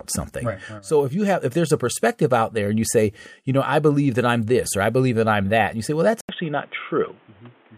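Right after "you say well that's", at 6.21 s, there's an 80 ms gap and the speech turns dull and boxy through to the end, with nothing above 3.8 kHz and a new noise floor well below it. That's likely an input switched to a poorer device, at much the same level.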